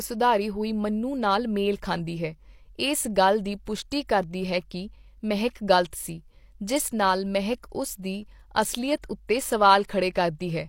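A transform codec spread quantisation noise across whole blocks, so pre-echo appears at 3.65 s, just after "ਹੈ ਇਸ ਗੱਲ ਦੀ", and at 9.02 s and 9.88 s. Each time a brief hiss of 16 to 18 ms leaks ahead of a sharp onset, leaving the attack softened and smeared.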